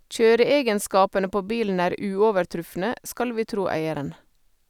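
Nothing goes wrong anywhere in this speech recording, so there's no fault to point to at any moment.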